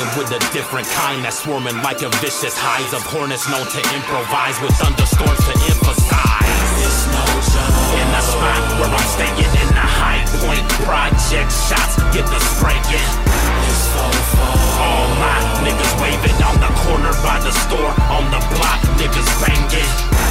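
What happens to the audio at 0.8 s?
Nothing goes wrong at 0.8 s; the audio runs through that moment intact, with no dropout, click or other fault.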